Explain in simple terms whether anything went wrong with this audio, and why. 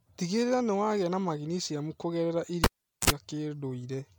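Two things went wrong. The first is generation loss, which runs through the whole clip. The speech sounds swirly, smeared and hollow, and the starts of sounds are blurred. The likely cause is the audio being squeezed into MP3 and unpacked again around seven times, with each pass adding fresh damage.

The second is a cable pulled and plugged in. It starts at 2.64 s, right after "wagia na magineciamu kũgerera". A pop is followed by about 0.41 s of near silence. Then there is a short 60 Hz mains buzz, about 0.05 s long, as the plug makes partial contact. A second pop at 3.10 s marks where the sound comes back.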